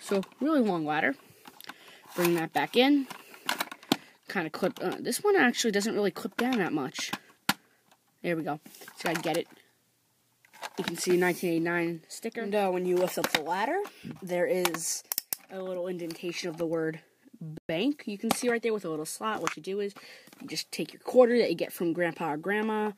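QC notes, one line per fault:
17.58–17.69 s, Bluetooth stall: the audio drops to silence for 112 ms, then resumes. The likely cause is radio interference delaying packets until the headphone buffer emptied, so playback halted until retransmitted data arrived and refilled it.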